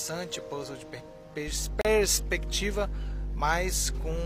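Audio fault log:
1.47–4.26 s, mains hum: a steady 50 Hz tone, about as loud as the sound itself, from power-line coupling; a bright horizontal line near the spectrogram floor.
1.81–1.85 s, gap between stream segments: 35 ms of silence where segment timestamps fail to meet, likely at a 2-second segment boundary; a flat, hard-edged hole in the waveform.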